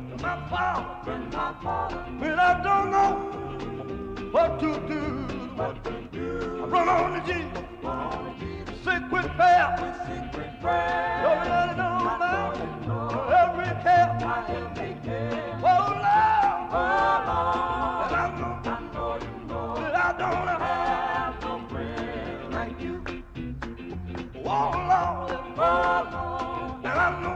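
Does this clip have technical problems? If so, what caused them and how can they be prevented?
No, the signal holds steady throughout, with no audible technical faults, so nothing here needs correcting or preventing.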